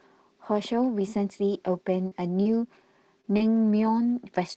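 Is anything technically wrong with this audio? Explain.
Yes. Between 2.07 and 3.88 s the speech has scattered short gaps. About four small pieces of audio went missing, roughly 40 ms at most. Together they lost 100 ms. The receiver covered each hole by stretching the last sound forward, which rebuilt 140 ms of audio, about 7% of that stretch. The speech stays clear, but you hear brief ticks, smears and hiccups. The call path's Opus coding adds its usual coding noise and stops the top end at 8 kHz.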